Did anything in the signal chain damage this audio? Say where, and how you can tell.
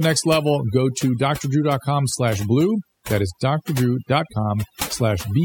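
Yes. Overdone noise removal in the processing stage runs throughout: the background drops to near silence with twinkling specks. A spectrogram shows scattered isolated time-frequency dots, with quiet speech detail gated out along with the noise.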